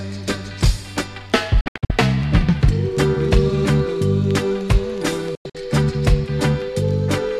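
The audio has two digital broadcast dropouts, at 1.61–1.90 s and 5.35–5.55 s. Each time the receiver mutes with a quick 3 ms fade, leaving short holes of up to 72 ms and 96 ms, because frames were lost or failed their checksum.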